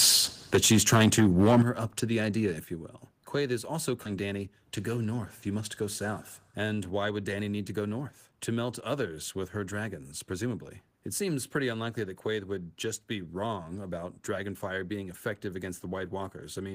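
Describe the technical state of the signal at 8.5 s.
At 8.5 s the speech signal is intact, with no audible dropout, clipping, distortion or other fault at that moment.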